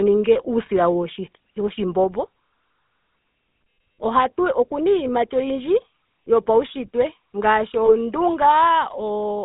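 Speech squeezed through the GSM full-rate codec, and you can plainly hear it. The whole thing has that buzzy, gravelly roughness, because the codec rebuilds the sound from a vocal-tract model driven by a sparse, regularly spaced pulse train. The band is cut to roughly 200 Hz to 3.7 kHz, so there's no air or sibilant detail up top, and the coarseness fits a 13 kbps full-rate stream. On top of that there are two short stretches of lost GSM frames, one at 0.66 to 0.70 s and another at 7.86 to 7.94 s, right after "iiyimati oyindji yopaunshitwe ngaashi". Each time the decoder papers over the gap by repeating the last good frame's settings, so you get a brief rough, metallic ring instead of a dropout. Both sound like a single missing 20 ms frame, which is why they never get long enough to fade to silence.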